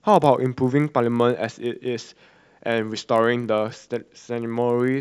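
A faint, regular buzz runs under the speech from start to finish, ticking about 50 times a second and dropping away in pauses. The resampler restarted on every block: each 20 ms block was converted alone, which fits a 48 kHz to 24 kHz conversion, leaving small errors at every block edge.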